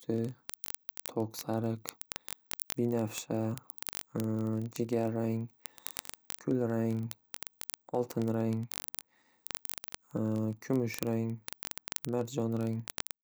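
A speech recording carries word clock ticks from 0.12 s to the very end at 13.23 s: sharp, uneven ticks arriving about every 20 ms, several hundred in all. The receiving device runs on its own clock, drifting roughly one part in a thousand from the sender, so each slip drops or repeats a single sample. Buffer dropouts would leave irregular audible gaps; these stay tiny and rigidly periodic throughout.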